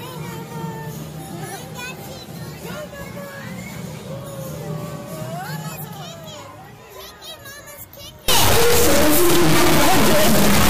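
From 8.28 s to the end at 10.69 s, the audio turns into an extremely loud, harsh buzz, a square-wave rasp that slams between silence and the clipping ceiling. This is integer read as float: samples stored as 32-bit integers are being interpreted as 32-bit floating-point values. Those bit patterns decode to numbers that are either vanishingly small or wildly beyond full scale. The output therefore snaps between zero and hard clipping instead of following the waveform.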